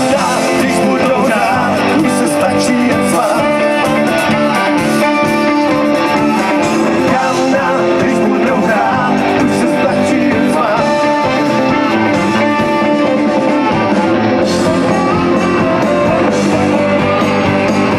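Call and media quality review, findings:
Hard clipping throughout. Crackle on the loudest peaks only. Signal runs about 2 dB past the ceiling of a converter or gain stage. A small fraction of samples hit the limit and are cut flat, adding high harmonics.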